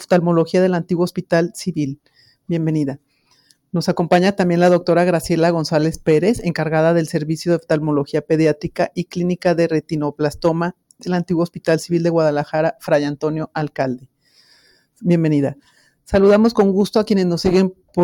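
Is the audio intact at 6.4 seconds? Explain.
No. At 6.4 seconds the sound is hit by hard clipping, which runs through the whole clip. The signal is driven about 8 dB past what the chain can carry, so its peaks are sliced flat. Only a small fraction of samples, around one or two percent, reach that ceiling, and the squared-off tops add high harmonics that come through as brittle crackle on the loudest moments. Soft saturation would instead thicken the tone smoothly and evenly. The same moment also carries a noise suppressor applied to music or sounds, again for the full length. Built for speech, it treats held tones, ambience and reverb as noise and pulls them down by roughly 5 dB, while onsets pass through. Sustained parts and tails sag and recover, giving a pumping, thinning quality. A compressor's pumping follows overall loudness, but this follows how steady the sound is.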